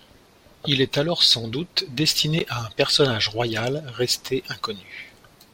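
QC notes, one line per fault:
2.39 s, Bluetooth stall: right after "est alors sans doute" the speech cuts to total silence for about 12 ms, then resumes with "à un personnage royal". The likely cause is radio interference delaying packets on the wireless link, so the headphones' buffer briefly emptied and playback halted until the retransmitted audio arrived and the stream continued.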